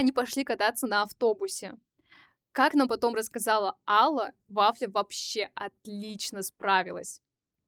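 Speech with no audible faults.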